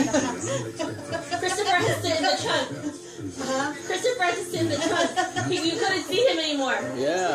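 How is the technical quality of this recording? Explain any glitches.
The recording has compressed frames skipped at three points. At 1.87 to 1.90 s the decoder drops what sounds like a few 20 ms frames, about 70 ms of audio. At 4.91 s it drops roughly one frame's worth, and at 6.79 s about two frames' worth. Each time the sound lurches forward.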